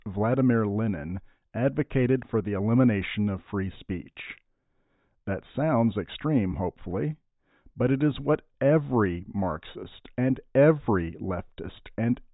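A speech recording, with no technical fault to be heard anywhere in it. Nothing in the audio calls for a time, a cause or a fix.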